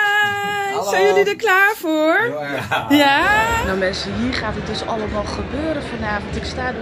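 The audio carries a fault from 0.00 to 4.22 s: the resampler restarted on every block. Each 20 ms block was converted separately, which fits a change from 48 kHz to 44.1 kHz. At each block edge, the converter lacked the real neighbouring samples. It filled in silence or the block's far end instead. So every edge picks up a small error. These errors repeat at 50 Hz and form a buzz at the block rate. The buzz is heard only while signal is present.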